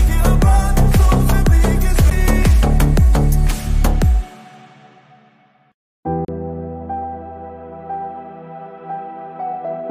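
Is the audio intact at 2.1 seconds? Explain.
No. At 2.10 s there is a CD skip: a brief tick and a dropout of roughly 10 ms, after which the sound carries on from a different point instead of continuing where it left off. A physical knock or a flaw on the disc threw the laser onto another turn of the spiral track. The player muted briefly while the pickup relocated, then resumed reading from the new position, causing the abrupt discontinuity.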